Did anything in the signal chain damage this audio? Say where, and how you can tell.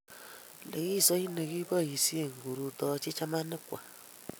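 Yes. Speech slows 5.7% and drops about a semitone from 1.38 to 2.55 s, then snaps back. This is likely a drift correction step re-matching clocks at the buffer.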